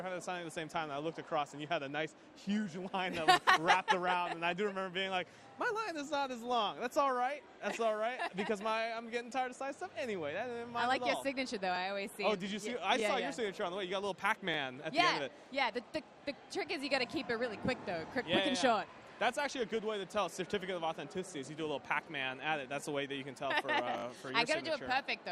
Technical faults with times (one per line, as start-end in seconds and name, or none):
11.76 repeated buffer
13.00 repeated buffer
14.54-14.56 repeated buffer
23.98-24.04 repeated buffer